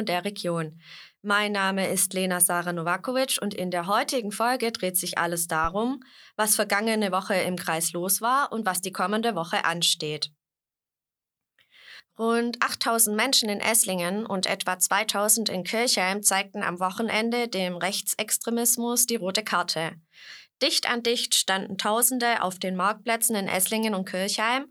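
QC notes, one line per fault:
5.64–5.72 s, phantom power thump: a deep, low-frequency thump lands in the speech, peaking at about -21 dBFS and dying away within roughly 17 ms. It comes from a supply being switched on a live input. The sudden voltage step passes through the coupling capacitors as a single low-frequency pulse, which is why it sounds like a dull knock rather than a click and fades out so quickly.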